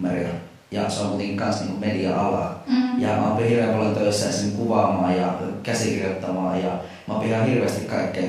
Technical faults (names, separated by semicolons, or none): none